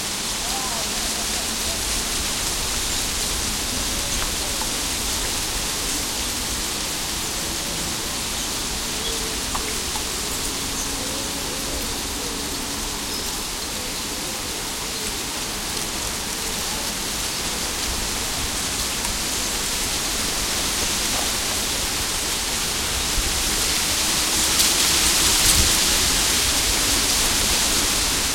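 No technical faults are audible anywhere in the recording.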